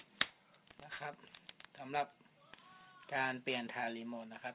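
Aliasing runs through the whole clip. Energy that sat above 4 kHz has folded back down to unrelated pitches, about 10 dB under the signal, with the spectrum pressed right up to 4 kHz. That fits a drop to an 8 kHz rate with no low-pass filter first.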